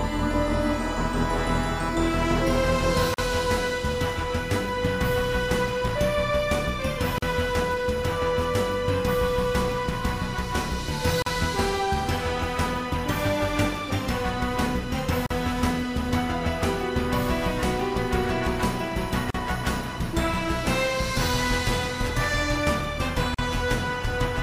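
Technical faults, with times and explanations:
3.14, 7.18, 11.22, 15.26, 19.30 and 23.34 s: gap at a join of encoded pieces. Every 4 s the sound drops out for about 40 ms (42 ms at the first), then resumes exactly where it stopped. The audio was encoded in separate pieces and butted together untrimmed, so each join keeps one run's padded final frame plus the next run's start-up delay of silence. The edges of each hole are smeared by the codec.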